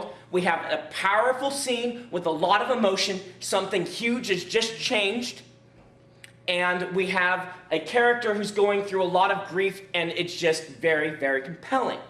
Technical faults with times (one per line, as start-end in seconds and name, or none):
5.85-5.87 DAB burbling